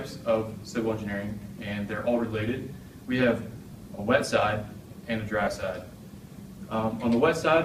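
At 3.73 s, a brief lost LE Audio frames event leaves a short noisy smear, a gap that fits one 10 ms frame. A longer one follows from 5.44 to 5.47 s, pointing to three frames. The decoder filled each gap by repeating the last spectrum with scrambled signs, so tonal detail turns to hiss.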